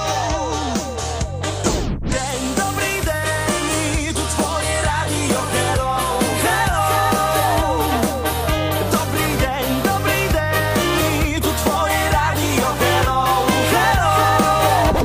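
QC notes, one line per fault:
1.44–1.46 s, loud pop: a single sharp pulse roughly 10 dB above the sound, likely a voltage step from a switch or plug, with the audio continuing underneath.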